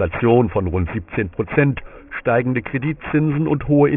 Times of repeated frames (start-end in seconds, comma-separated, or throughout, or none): none